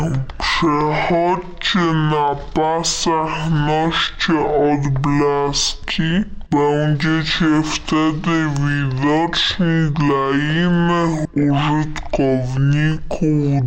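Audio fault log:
Throughout: stereo read as mono. The file's interleaved left and right samples are being taken in turn as one continuous channel, so every frame of the original yields two consecutive samples instead of one. Played back at the expected rate, the material therefore runs at 0.5x speed and sits a full octave down, 12 semitones below where it belongs, sounding slow and heavy. Alternating samples from the two sides also leave a fainter mirrored copy of the content in the upper half of the spectrum.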